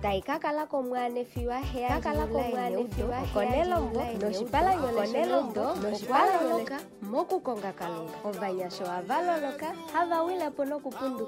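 From 1.86 s to 6.68 s a doubled audio track runs: an equally loud copy trails about one and a half seconds behind, likely from a second, slower capture path. It starts and stops abruptly, and the spectrogram shows every full-band pattern repeated at that offset.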